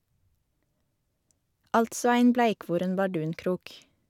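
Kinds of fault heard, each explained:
No kinds of fault are heard in this clip.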